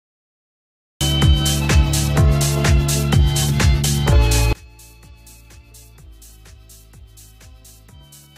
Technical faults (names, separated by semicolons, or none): cut-off start; one channel inverted